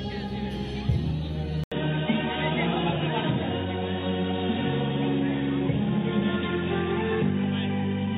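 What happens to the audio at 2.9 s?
At 2.9 s the audio is in a narrowed, duller stretch. It begins at 1.64 s, after a silence of 80 ms, and lasts to the end. Nothing is heard above 3.8 kHz, so the sound turns boxy. A new background noise sits well below the signal. The level stays about the same. The likely cause is an input switched to a poorer device, such as another microphone or a headset's call profile, with a narrower band and its own noise.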